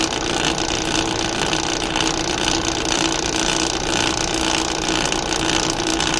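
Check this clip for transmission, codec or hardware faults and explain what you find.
No transmission, codec or hardware faults are audible here.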